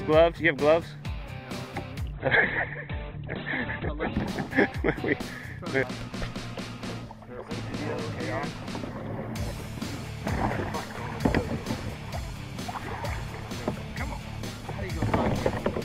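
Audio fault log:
2.13–4.13 s: adaptive stream at a lower bitrate. For two seconds the treble disappears above about 4.2 kHz and the sound turns thin, consistent with the stream falling back from roughly 64 kbit/s to about 12 kbit/s Opus while the connection slowed. The switch is abrupt at both ends, with no gap. On a spectrogram the upper band cuts off sharply in a flat-topped block. The waveform stays continuous, without a dropout.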